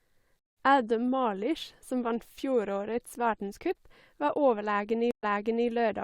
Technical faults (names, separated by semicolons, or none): stream reconnect